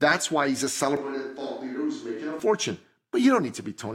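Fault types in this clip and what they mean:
Switch to a distant microphone: From 0.97 to 2.40 s the speech turns suddenly roomy and hollow, with thinner bass. It drops about 5 dB and picks up faint room noise, around 35 dB below the speech. The close microphone likely dropped out, then abruptly returned.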